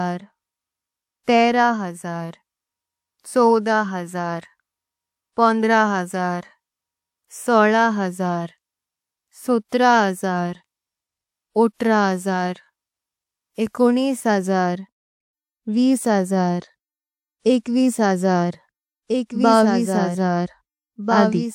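Pre-echo at 1.23 to 1.28 s smears a speech attack with about 41 ms of hiss ahead of it, as transform-codec noise fills the quiet start of that block. A doubled audio track runs from 19.09 s to the end: a full-band copy about 5 dB quieter, trailing by roughly one and a half seconds, likely from a slower second capture path or an out-of-step edit.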